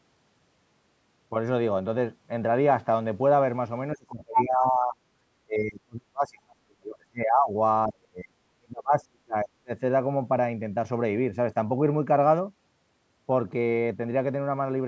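Between 3.95 and 4.97 s the talker drops by up to about 25 dB. This is speech suppressed in double talk, likely the echo canceller turning down both sides while the far end talks. The voice dips, loses its high end or cuts out in pieces. From 4.34 to 4.43 s there is a brief scrap of the other side's voice leaking through, a little louder than the talker. It is likely residual loudspeaker echo, and it is distinct from the suppression because a second voice appears. Deeper suppression follows at 5.45–7.52 s (about 40 dB) and 7.87–9.72 s (about 35 dB).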